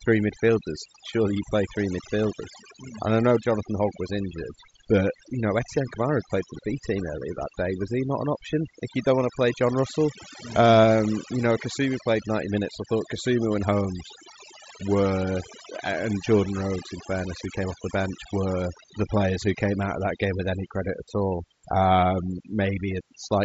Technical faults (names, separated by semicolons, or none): overdone noise removal; concealed Bluetooth headset packet loss